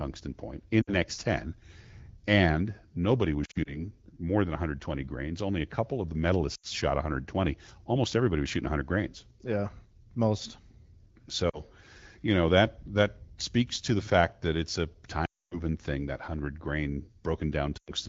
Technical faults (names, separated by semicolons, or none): lost AMR speech frames